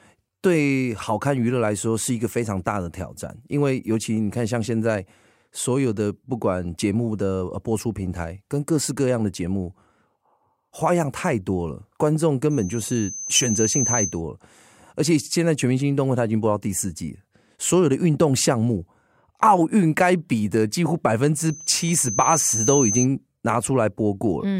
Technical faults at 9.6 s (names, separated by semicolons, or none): none